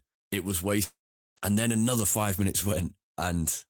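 At 0.83 s the speech breaks into a fading buzz, then 0.41 s of silence, and resumes at 1.38 s with 0.54 s of speech gone. This is likely a long network dropout, with the receiver stretching the last sound before giving up.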